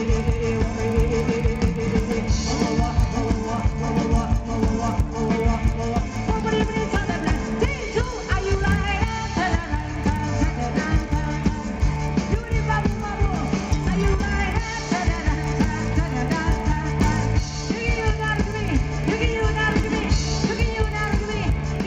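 Throughout, the resampler restarted on every block, converting each 40 ms chunk without its neighbours. The resulting edge errors produce a 25 Hz ticking buzz wherever sound is present.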